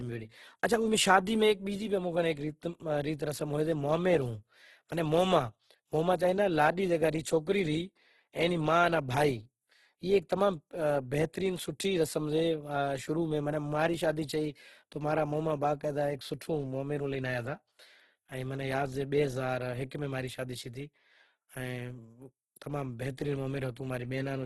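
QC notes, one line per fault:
throughout: Opus compression. The speech sounds rough and grainy, with a noisy fizz on voiced tones and nothing above 12.2 kHz. This is likely Opus in its CELT music mode, filling starved bands with folded or noise energy, which fits a bitrate near 12 kbps.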